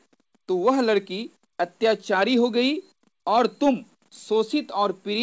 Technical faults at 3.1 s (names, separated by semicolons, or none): none